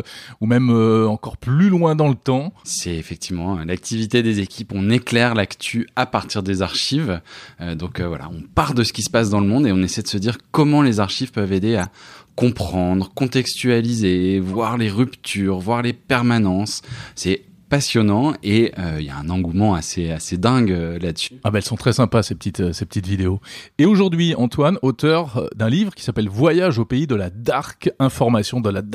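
Three short glitches are corrupt frames decoded. At 11.81 to 11.86 s, after "les archives peuvent aider", a glitch peaks around -15 dBFS. At 14.53 to 14.55 s, before "les ruptures voir les", a fainter glitch sits near -25 dBFS. At 25.10 s, just before "d'un livre qui s'appelle", a glitch reaches about -20 dBFS. Each time, flipped bits in a few compressed frames were decoded anyway. Energy landed at wrong frequencies, heard as a squeak or noise burst.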